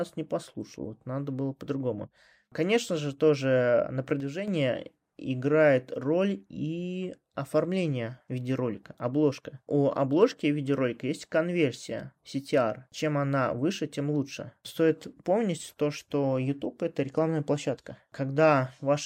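Speech recording. From 4.20 to 4.48 s the level falls abruptly by about 6 dB, leaving a square-edged waveform dip across all spectrogram frequencies; one channel likely drops out.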